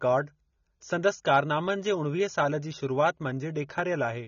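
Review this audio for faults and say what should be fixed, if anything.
The speech has plainly audible AAC compression throughout, likely from a low-bitrate encode: nothing above 7 kHz, dull, smeared, fizzy sibilants. Encode at a higher bitrate or keep a lossless master.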